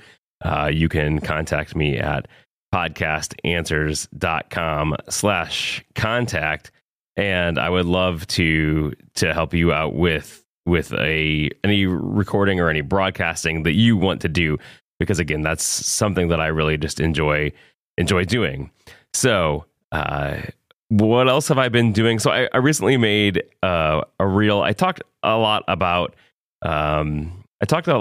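Nothing in this bit of speech trips any alarms; there's no technical fault to point to anywhere in it.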